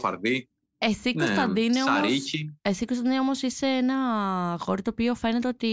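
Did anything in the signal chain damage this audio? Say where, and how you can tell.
No, no signal chain damage.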